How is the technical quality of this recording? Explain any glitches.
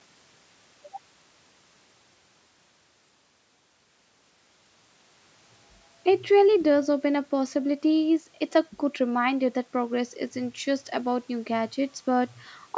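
Nothing stood out on listening; the speech keeps the limited bandwidth of call microphone processing, with no content above 8 kHz, which is expected for that path.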